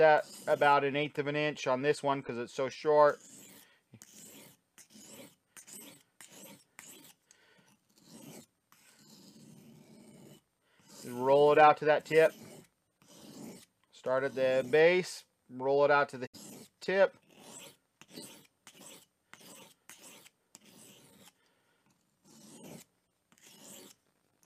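At 16.25 s there's a digital broadcast dropout, lasting until about 16.36 s. The sound quickly fades out over roughly 20 ms rather than snapping off, sits in silence, then picks up again later in the programme. That's the receiver losing the signal or hitting frames that failed their checks and muting until clean ones arrived. The roughly 64 ms gap fits a couple of lost frames, and whatever was sent during it is simply gone.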